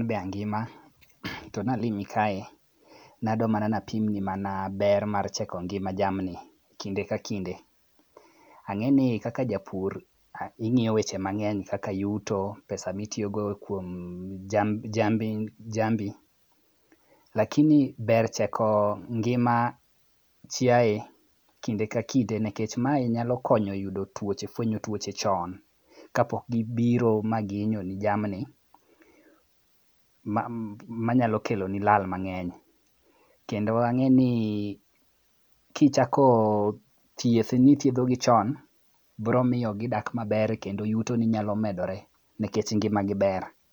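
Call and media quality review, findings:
Nothing stood out on listening to this speech recording.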